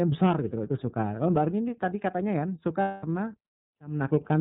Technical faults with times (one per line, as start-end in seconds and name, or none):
0.00-4.41 iLBC codec
2.82-3.06 lost iLBC frames